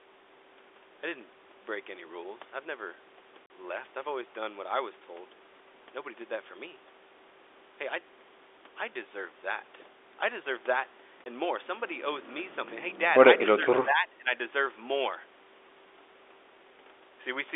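At 3.47 to 3.49 s and again at 11.24 to 11.26 s, packet loss filled with silence leaves hard-edged holes of about 40 ms and 20 ms. These fit two lost 20 ms packets and then one. Unlike fades, they start and stop abruptly on packet boundaries.

From 13.6 to 14.34 s the speech dips by about 10 dB for around half a second in pieces, likely speech suppressed in double talk. The level drops in gated chunks rather than as clean, packet-sized gaps.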